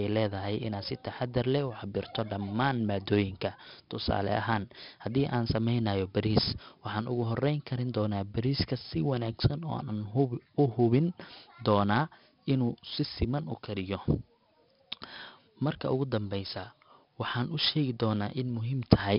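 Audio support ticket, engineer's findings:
Gritty hiss riding every loud syllable, harsh breakup on sharp speech onsets, dull top with nothing above 5.3 kHz, throughout. Probable 4-bit ADPCM compression, heavy damage: coarse prediction steps lag transients. Band limit fits roughly 11 kHz sampling, about 44 kbps.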